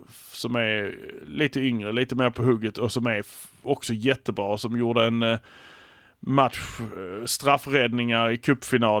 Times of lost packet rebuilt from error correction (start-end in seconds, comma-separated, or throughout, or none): 2.55-2.57